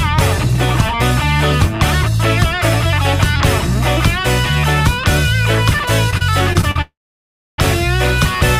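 Between 6.10 and 6.76 s, packets arrived late or more slowly than they were played out, and the jitter buffer ran dry five times. This produces repeated stalls (stutter): each time, the receiver continued the last sound until data returned, filling 138 ms in total, with the longest gap 41 ms and about a fifth of that stretch concealed. Nothing is lost, but the audio drags and stutters. At 6.81 s a call audio freeze follows, likely caused by packets being held up in transit until the jitter buffer emptied completely. The last sound is carried on briefly and then gives way to silence for 650 ms of the 768 ms wait. At 7.59 s the audio resumes from where it stopped, so a 768 ms gap has been inserted and everything after it is delayed by that amount, with nothing missing.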